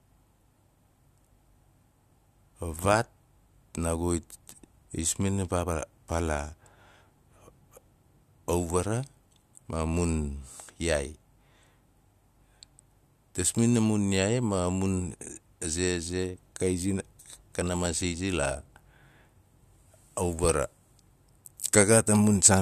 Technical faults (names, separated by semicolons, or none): none